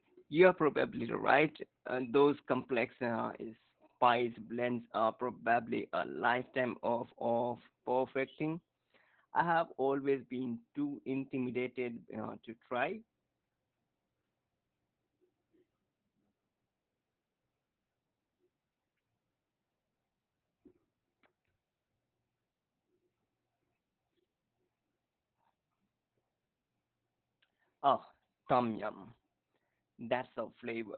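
From start to finish the speech carries heavy Opus voice compression. The muffled, hoarse, slightly robotic quality points to the SILK coder squeezed into narrowband at roughly 8 kbps, so the top end is gone and the excitation is only coarsely coded.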